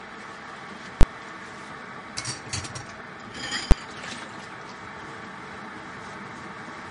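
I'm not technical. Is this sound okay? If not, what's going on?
No. The whole recording sounds watery and swirly, and everything above about 10.6 kHz is missing, so it seems dull. That is most likely MP3 compression: the file was squeezed so hard that the encoder dropped the treble and the quieter detail.

There are also two sudden loud bangs, one from 1.01 to 1.03 s and another at 3.71 s. These come from invalid numbers at full scale: a calculation failed, and for a split second the audio jumped to an extreme value far louder than the sound around it.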